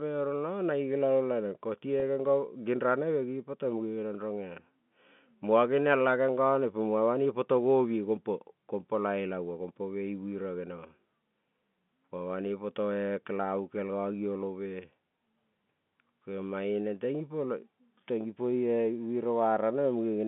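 At 2.00 to 2.02 s there is packet loss with pitch repetition. About 20 ms of audio went missing, which fits a single lost packet. The receiver filled the hole by replaying the last pitch period it had. Because the gap is so short, the patch holds rather than fades. It sounds like a brief, slightly buzzy sustain, a tiny frozen tone. The speech then picks up again. Around it, the G.711 telephone line keeps its narrow 150 Hz to 3.5 kHz band.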